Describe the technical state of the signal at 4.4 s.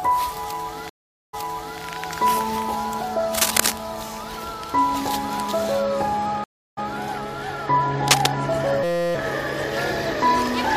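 At 4.4 s the signal is intact, with no dropout, distortion or other technical fault to be heard.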